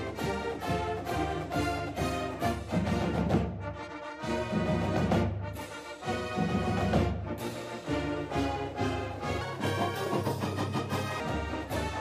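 From 9.41 to 11.2 s the section at the wrong speed was likely resampled against the wrong clock, so it plays 1.34 times too fast. The audio turns hurried and rises by roughly five semitones, with speed and pitch shifting together until normal playback returns.

Inside that section, at 10.22 to 10.27 s, compressed frames were skipped: the decoder dropped data consistent with a single 42.7 ms frame, losing about 40 ms. The audio jumps ahead.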